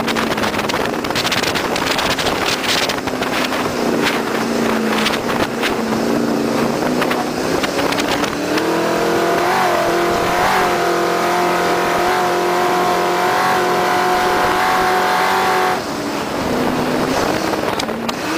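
DAB burbling occurs at 1.57–2.33 s, 5.06–5.72 s, 9.88–10.73 s, 11.86–12.09 s, 14.15–15.06 s and 16.53–17.27 s. Weak reception lets bit errors, around one percent in the first and third bursts and about half that elsewhere, slip past error correction into the MP2 data. Corrupted samples put short blips of noise in single sub-bands, and corrupted scale factors make individual sub-bands leap in level for up to a frame.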